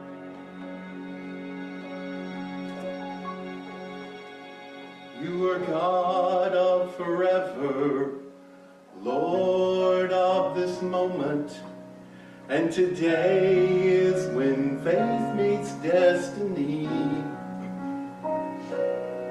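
Nothing in the audio stood out as a technical problem on listening.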